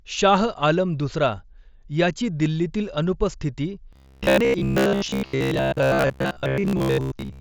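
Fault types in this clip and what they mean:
Robotic sound from repeated short buffers: From 3.93 s, just after "दिल्लीतील अनुपस्थिती", to 7.40 s, the speech turns into a rigid, metallic buzz locked at 66.8 Hz that only loosely follows the words, heard through the mSBC Bluetooth path with nothing above 8 kHz. The likely cause is audio arriving too seldom, so a segment of about 15 ms was replayed over and over, filling most of that stretch while the real audio was skipped.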